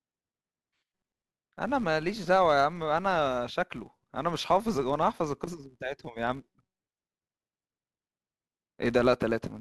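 A buzz runs through the whole speech clip. It comes from a filter restarted on every block. The filter drops its memory at each block boundary and begins again from silence. That leaves a small click at the start of every block. The clicks repeat at 188 Hz, which fits 256-sample blocks at 48 kHz. At that rate they blur into a steady buzz. It rises and falls with the loudness of the speech.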